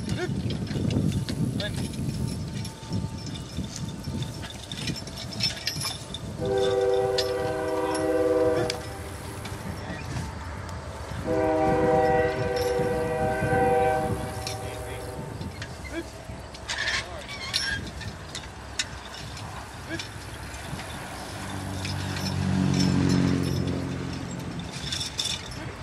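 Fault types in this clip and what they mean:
No technical faults can be heard anywhere in this audio. There is nothing to list for it.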